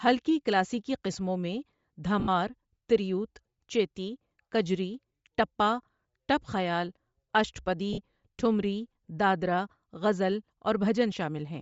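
Bluetooth LC3 compression runs through the whole speech clip, likely from LC3 coding at a low rate near 32 kbps with 10 ms frames: the upper spectrum is thinned and noise-filled, giving a plainly audible breathy, grainy edge.

Lost LE Audio frames occur from 2.20 to 2.29 s, where about 60 ms of audio drops out in pieces scattered over 80 ms, the longest gap around 40 ms. The decoder repeats the last spectrum with scrambled signs, so the sound smears into noise. A second loss, 50 ms long from 7.93 to 7.99 s, produces the same smeared, noisy patch.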